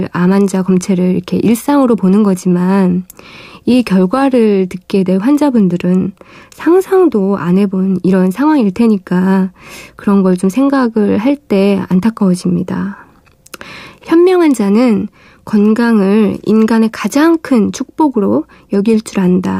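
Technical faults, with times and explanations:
No technical faults are audible.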